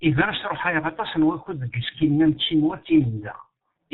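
The whole thing runs through a G.723.1 codec, and it's badly mangled. Nothing gets through above 4 kHz, so the speech sits muffled and a bit hoarse, and the consonants smear into each other. The voice model only updates every 30 ms frame, so fast changes get blurred over. That level of damage fits the codec's low rate, around 6.3 kbit/s.

Then from 1.43 to 1.48 s there's VoIP packet loss concealed by the speech codec. The decoder lost a chunk of audio and carried on by extrapolating the last pitch and filter it had, turning the level down as it went. You hear the sound stretch into a short buzzy tone or coloured noise that fades. The length fits a single lost 30 ms frame, and the voice stays weak or distorted for tens of milliseconds after it.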